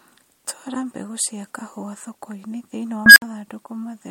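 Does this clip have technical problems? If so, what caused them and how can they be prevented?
Yes. An unstable filter hits from 3.06 to 3.22 s, just after "kahũa thokoinĩ thĩinĩ wa". A recursive filter with bad coefficients feeds on itself. A squeal around 1.5 kHz swells over 0.1 s and clips. The output then overflows, leaving 60 ms of silence. To prevent it, check filter coefficients for stability before use and reset the filter state on overflow.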